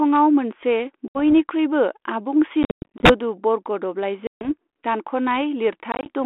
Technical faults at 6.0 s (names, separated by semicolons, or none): packet loss on an ADPCM call